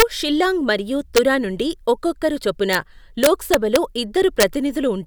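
Integer overflow cracks hit this speech at 0.00–0.02 s, just before "షిల్లాంగ్ మరియు", at 1.17 s, just before "నుండి ఒక్కొక్కరు చొప్పున", at 2.73 s, across 3.24–3.76 s, just after that phrase, and at 4.40–4.43 s. Peaks pushed from about 0 to 2 dB past full scale wrapped to the opposite sign instead of being limited, so each one jumps across the whole range and sounds like a harsh snap, far sharper than clipping. The longest run is at 3.24 s.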